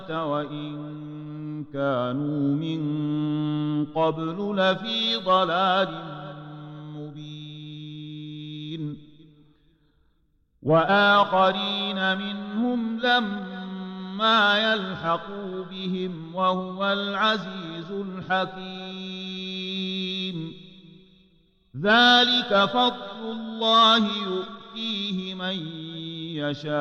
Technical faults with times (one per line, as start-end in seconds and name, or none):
none